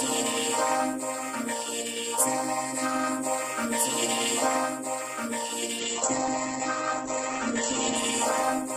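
Throughout, a doubled audio track repeats everything about 1.5 s late and roughly 5 dB quieter, likely from a second capture path; the waveform shows a repeated envelope without decay. From 5.82 s to the end, a call bitrate drop from 48 to 10 kbps roughens the sound and muffles it, and the spectrogram's top edge falls from 20 kHz to 8 kHz.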